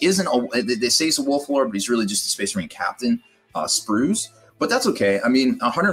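Throughout the clip, a noise suppressor applied to music or sounds is at work. A suppressor built for speech judges sustained and decaying content to be background noise and keeps pulling it down, so the level swings by around 10 dB as onsets pass and held parts or tails are lowered. This is different from a compressor, which reacts to loudness alone. Here the gain follows how steady the sound is, giving a pumping, fluttering, thinning effect.

From 2.67 to 3.55 s, and again from 4.29 to 4.61 s, the sound is cut by the noise suppressor more deeply than elsewhere. The drop reaches about 18 dB in the first stretch, affecting roughly 0.7 s, and about 15 dB in the second, affecting roughly 0.3 s. Unlike a dropout, the audio does not vanish abruptly. The sustained content sinks or has its decay cut short, while anything sudden still comes through.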